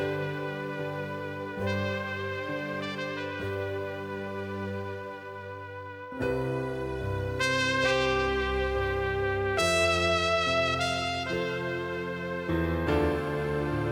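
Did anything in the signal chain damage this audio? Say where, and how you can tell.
No, nothing in this one points to damage anywhere along the chain, so there's no stage to single out.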